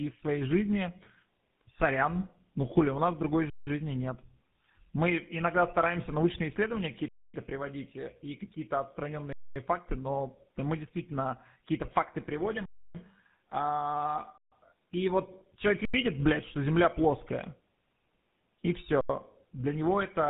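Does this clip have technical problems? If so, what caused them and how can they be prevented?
Yes. Throughout, the speech sounds rough, muffled and warbly, with nothing above 3.8 kHz. This is tandem speech coding: the call passed through GSM full rate at 13 kbit/s, was decoded to G.711 mu-law at 64 kbit/s, then coded again in GSM full rate. The second GSM coder had to model audio the first had already damaged, so the errors added up. Prevent this by keeping the call in one codec end to end, using transcoder-free operation where the network supports it.

The sound also stops dead seven times, at 3.50 to 3.67 s, 7.08 to 7.34 s, 9.33 to 9.56 s, 12.66 to 12.95 s, 14.38 to 14.52 s, 15.85 to 15.94 s and 19.01 to 19.09 s, each pause lasting 85 to 291 ms. These are underruns with a held sample: the output buffer ran dry, and the converter froze on its last value, giving a flat, silent stretch with almost no click. 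Nothing seems to be lost, and the sound resumes softly where it stopped. Some gaps fit blocks of 4096 or 8192 samples at 48 kHz. Prevent this by enlarging the output buffer and giving the audio thread priority so it is refilled in time.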